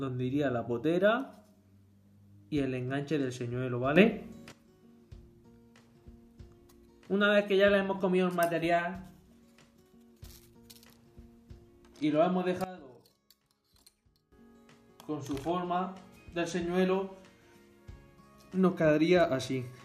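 At 3.96 s the level jumps up by about 10 dB in one step and stays there until 4.52 s, then drops back just as abruptly. Around 12.64 s it does the reverse, falling by about 18 dB until 14.32 s. Both are sudden gain jumps: the background noise moves with the sound. That points to a digital gain change applied with no ramp, likely a setting or bit shift switched mid-stream.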